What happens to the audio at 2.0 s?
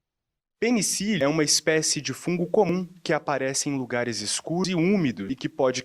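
Nothing goes wrong at 2.0 s; the speech carries on intact through that moment, with no dropout, click or glitch to be heard.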